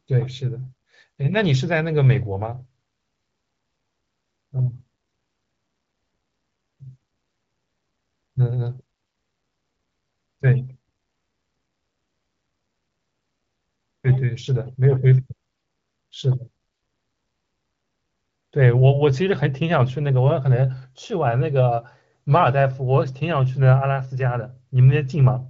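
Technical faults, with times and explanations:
No technical faults are audible.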